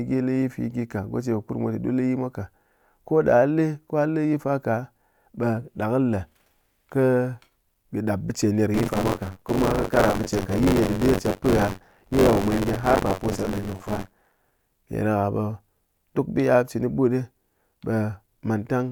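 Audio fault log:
8.74–14.74 s, buffer tearing: robotic 93.8 Hz buzz, fitting a 512-sample buffer, as about a fifth of each period replays audio roughly 40 ms old.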